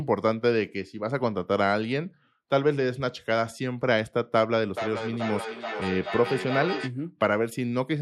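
From 4.69 to 6.96 s, feedback echo between two devices: a second device's playback re-enters the microphone, so speech returns roughly every 400 ms, peaking about 8 dB below the talker.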